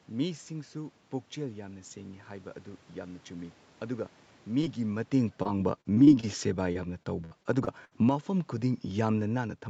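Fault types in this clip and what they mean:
Short concealed packet loss: A brief smear or wobble at about 4.61 to 4.65 s. Around 20 ms of the speech never arrived in time, so the receiver stretched the preceding sound to cover the gap and then blended back into the real audio.
Automatic gain falling: From about 4.8 s to the end, the speech gradually sinks, with the background sinking along with it. The automatic gain control judged the input too loud, or its background noise too strong, and slowly lowered its gain.
Repeated packet loss (robotic sound): Choppy speech with pieces missing, from 5.43 to 6.25 s and again from 6.73 to 7.93 s. Packets dropped out repeatedly, in five and then six gaps up to 64 ms long, and each hole was patched by continuing the last sound.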